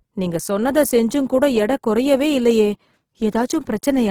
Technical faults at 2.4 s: Opus compression

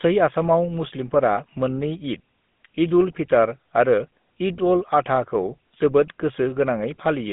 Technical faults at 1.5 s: GSM full-rate codec

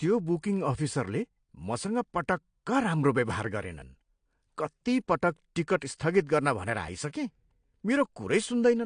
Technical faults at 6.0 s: AAC compression; pre-echo

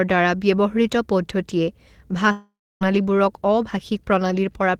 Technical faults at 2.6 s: long network dropout

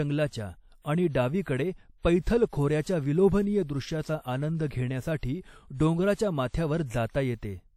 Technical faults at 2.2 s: WMA compression; pre-echo

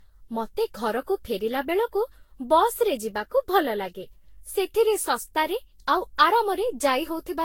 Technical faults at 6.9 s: generation loss

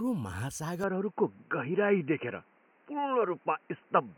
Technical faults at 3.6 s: input switched to a poorer device

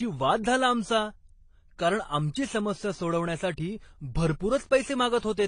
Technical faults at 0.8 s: transcoding between lossy codecs

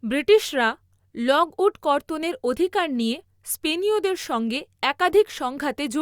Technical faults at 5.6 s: none

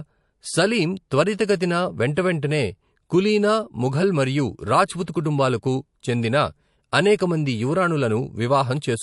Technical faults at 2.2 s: MP3 compression; pre-echo

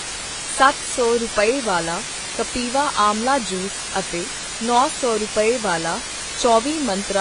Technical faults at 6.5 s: low bit depth with dither; AAC compression

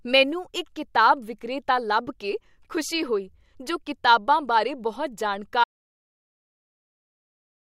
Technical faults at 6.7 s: audio dropout to silence

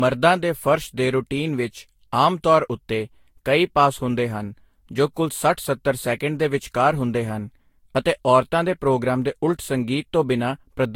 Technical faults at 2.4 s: generation loss

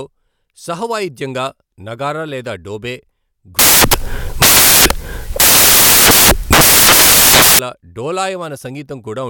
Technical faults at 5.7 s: samples built from the wrong bytes

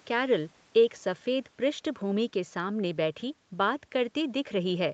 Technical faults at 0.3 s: none

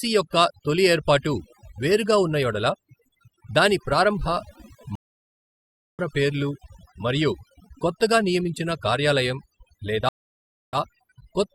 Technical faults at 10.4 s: overdone noise removal; stream reconnect

